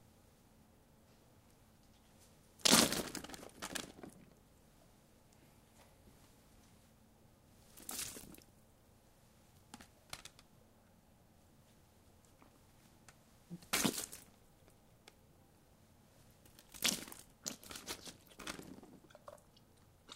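No technical faults are audible.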